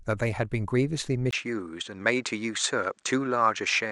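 At 1.31 s the speech drops out for about 20 ms, then comes back duller and narrower, with nothing above 8.9 kHz and a faint new noise floor well under it, at about the same level. That's likely the input switched to a poorer device, and it stays that way to the end.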